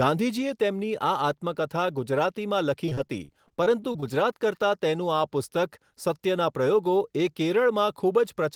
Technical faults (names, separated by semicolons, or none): repeated packet loss (robotic sound)